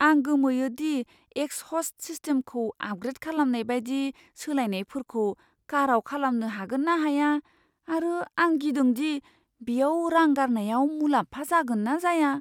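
No technical faults are audible.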